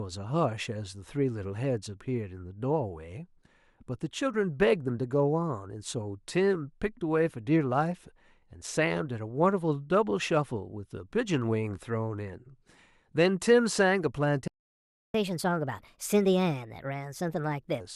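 A playback stall at 14.48 s silences the speech mid-flow for about 0.66 s, likely because the player ran short of data or its thread was blocked. Catch-up at higher speed follows from 15.14 to 17.80 s: the backlog is resampled at 1.25 times normal speed, raising the pitch by about four semitones until normal rate returns.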